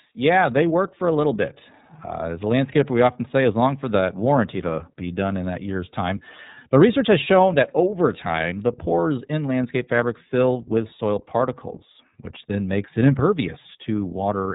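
From start to finish the speech carries the iLBC codec: each 30 ms frame is coded independently, leaving a rough, synthetic edge, and a spectrogram shows nothing above 3.8 kHz.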